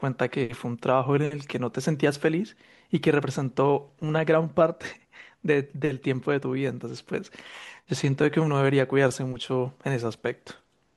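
No technical faults can be heard in the speech at any point.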